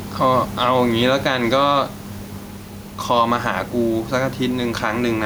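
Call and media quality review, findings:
Gain pumping, throughout the speech. Level swings of around 5 dB. Dynamics squashed, loud and soft passages pulled close together. Likely cause: input gain set far too high, with a fast limiter or compressor clamping level on each peak and releasing between them. Room noise sits about 30 dB below the speech.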